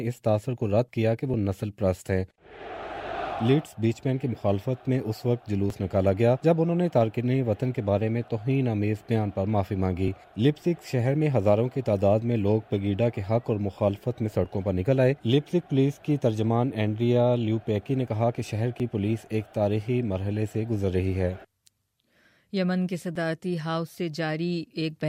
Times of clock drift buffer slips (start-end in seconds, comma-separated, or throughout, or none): 1.34-23.16